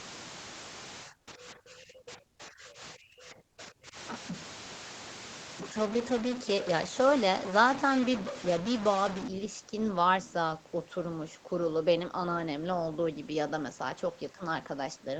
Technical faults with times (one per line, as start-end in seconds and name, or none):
0.00-9.28 stuck bit
1.04-3.95 speech suppressed in double talk
1.19-1.27 comfort noise in place of the background